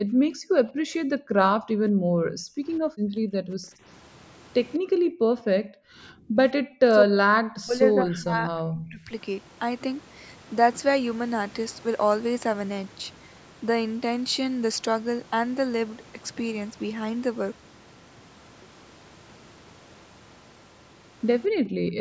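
Background gated by the echo canceller, 0.00 to 1.72 s: while the far-end loudspeaker plays, the canceller clamps the microphone, so the room sound drops by about 40 dB for roughly one and a half seconds before returning.

Speech suppressed in double talk, 2.00 to 2.06 s and 2.30 to 2.34 s: the speech briefly ducks deeply, in short bites. The likely cause is the canceller mistaking simultaneous talk for loudspeaker echo and attenuating both.

Background gated by the echo canceller again, 2.62 to 3.80 s: the ambience sinks by about 39 dB for about a second while the far end is active, then comes back.

Echo leak, 4.74 to 4.78 s: a faint scrap of repeated speech appears far below the main level, 201 ms behind the original, likely residual loudspeaker pickup that the far-end canceller failed to remove.

Background gated by the echo canceller, 4.79 to 6.38 s: the room sound drops by about 40 dB for roughly one and a half seconds.

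Speech suppressed in double talk, 6.82 to 9.11 s: likely with both sides talking, the speech is cut deeply, by about 40 dB, for around two seconds.

Background gated by the echo canceller, 21.49 to 21.99 s: a shallower dip of about 16 dB lasts half a second at the very end.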